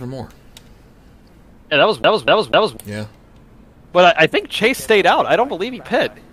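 From 2.03 s to 2.77 s the audio gets stuck on one turn of the CD. A defect on the disc surface makes the laser jump back one track each time it reaches the same point, so a 247 ms fragment plays three times in succession with a brief mute at every jump. The result is a rapid, evenly spaced stutter, the mechanical repetition of a skipping disc, before playback moves on.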